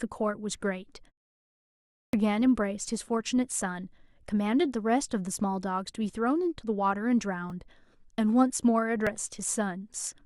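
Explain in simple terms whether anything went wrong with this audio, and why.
Two things went wrong. At 1.54 s, after a half-second pause, the speech comes back abruptly with about 0.59 s missing. This is a clipped start after a pause: the output device dozed off in the silence and woke too late. Keeping the device awake through the pause would cost no speech.

At 7.50 s and 9.07 s there is a repeated buffer. A tiny piece of sound, about 1.5 ms, which fits a 64-sample buffer, plays twice more. Because the piece is so short, you hear a brief click or buzz rather than a stutter, and nothing is lost.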